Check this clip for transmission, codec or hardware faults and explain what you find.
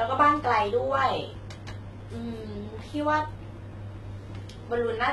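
There's one codec problem, and it runs through the whole clip: heavy HE-AAC compression, at a rate that sounds like it's down around 16 kbps. The sibilants give it away. The s sounds come out gritty and lispy, with a metallic edge. The treble has likely been rebuilt by spectral band replication, where lower bands are copied upward and shaped only roughly, so the harmonics up there don't line up with the real ones. Nothing reaches above about 11.8 kHz.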